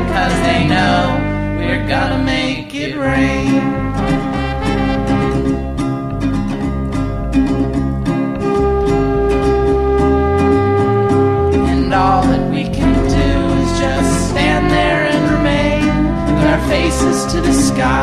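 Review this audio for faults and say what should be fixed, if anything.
No technical faults can be heard anywhere in the audio. Nothing here needs to be fixed.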